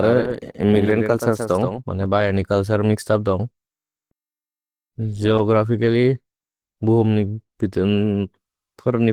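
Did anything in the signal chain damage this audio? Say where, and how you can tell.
Yes. The codec stage left damage across the whole clip. The speech sounds rough, hoarse and grainy, and the damage is plainly audible from start to end. The bandwidth stays full, with content reaching about 20 kHz, so this is not simple low-pass muffling. The band energy is kept, but fine detail is replaced by noisy fill. That texture points to Opus compression at a low rate, around 16 kbps, in its hybrid speech mode.

A doubled audio track is already running when the clip opens and stops abruptly at 2.06 s, just before "बयनि कल्सर्". A second full-band copy trails the original by roughly 150 ms, at about 5 dB quieter. It has no decay or room colour, so it is not an echo from a space. It is a clean, fixed-delay duplicate. The likely cause is a second, slower capture path or an edit that overlapped two copies.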